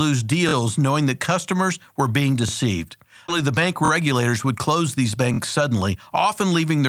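Speech with three kinds of playback fault. A repeated buffer causes brief stutters at 0.49–0.53 s, 2.49–2.51 s, 3.85–3.90 s and 5.34–5.39 s, where a 23 ms piece, consistent with a 1024-sample buffer, replays once or twice with hard joins and nothing lost. A skip ahead at 3.28–3.30 s is the reverse: about 0.4 s of speech drops out, and the two sides join almost directly with no repetition or gap. From 4.01 to 6.78 s a jitter buffer speed-up trims short pitch-period pieces, removing about a fifth of a second overall, so the speech runs 7% faster and sounds hurried while its pitch stays unchanged, unlike a resampling speed change.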